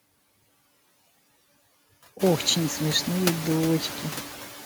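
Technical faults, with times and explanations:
Throughout, noise suppressor artifacts: the steady background is cut by about 16 dB frame by frame, so it sinks in pauses and returns beneath speech. A spectrogram shows a flickering, patchy noise floor, and the waveform's gaps pump, including after the room noise rises around 2 s.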